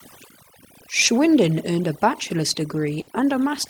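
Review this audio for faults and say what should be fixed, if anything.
Overdone noise removal runs throughout. Bands near the noise estimate are cut hard, leaving twinkling specks rather than the steady hiss left by weaker denoising.

Short concealed packet loss at 1.05–1.09 s: about 20 ms was filled by extending the preceding sound, heard as a brief smear, not a silent dropout.

Burst of packet loss at 3.01–3.09 s: about 60 ms was bridged by a continued sound that fades before the audio resumes further on. It is longer than the earlier gap.

To prevent these, lower the noise reduction strength and add jitter buffering or redundancy on the network path.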